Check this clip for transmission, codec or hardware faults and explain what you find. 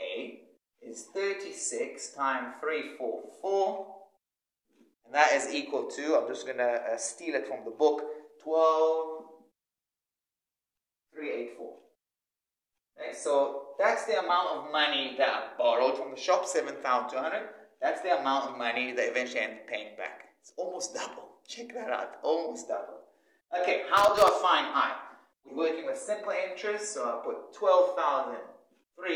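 There is one hardware fault, loose connector crackle, from 23.97 to 24.28 s. A worn contact made and broke repeatedly, chopping the signal into an irregular, scratchy burst of crackle.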